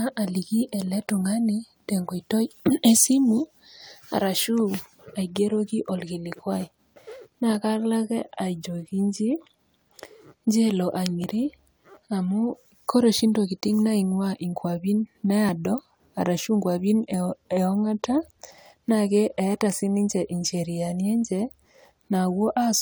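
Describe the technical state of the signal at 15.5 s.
A dropped buffer (overrun) occurs at 15.49 s. The speech jumps abruptly, and about 20 ms of audio is missing, with no gap of silence at the join. The likely cause is that the recording software failed to read a block of samples before the audio hardware wrote over it. That block is lost, and the audio on either side is spliced directly together, so the sound skips ahead.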